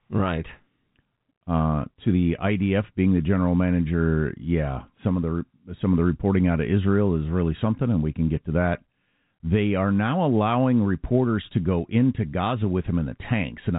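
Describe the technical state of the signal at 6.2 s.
At 6.2 s the audio is intact, with the speech carried through G.711 telephone coding that leaves nothing above about 3.8 kHz and only faint codec damage at most.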